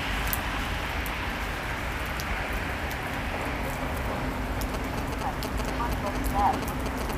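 From 4.74 s to 7.11 s, a galloping dit-dit-dit rhythm of short buzzes cuts across the everyday sounds, roughly as loud as the sounds themselves. These are GSM signalling bursts. A nearby 2G phone was exchanging short groups of radio bursts with its network rather than carrying a call, and the audio circuitry rectified that radio energy into audible pulses. The buzz sits at 216.7 Hz, the repetition rate of the bursts.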